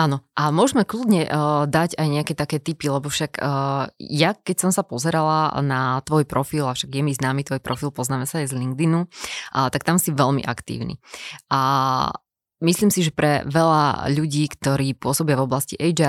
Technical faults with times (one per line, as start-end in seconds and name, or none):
7.73 corrupt frame decoded
14.48 corrupt frame decoded